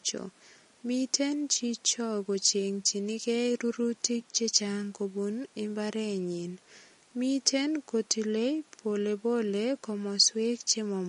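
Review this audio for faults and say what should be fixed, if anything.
Throughout the clip, an encoder short of bits, likely MP3 compression at a rate that fits about 40 kbps, has cut the treble and switched weak frequency lines on and off. Nothing remains above 10.6 kHz, and the speech sounds dull, watery and swirly, with metallic chirps on s sounds. Encoding at a higher bitrate, or working from an uncompressed source, would prevent this.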